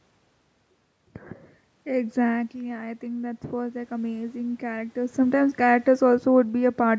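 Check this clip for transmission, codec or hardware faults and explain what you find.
One fault stands out: automatic gain rising, from 2.51 to 5.24 s. Around 2.5 s the speech drops by about 9 dB as the talker moves away from the microphone. The automatic gain control reads that as a too-quiet input and slowly raises its gain, by about 5 dB over nearly three seconds. The speech climbs back up, and the room noise swells with it. That shared swell sets it apart from a talker simply moving, where only the speech changes and the background stays put.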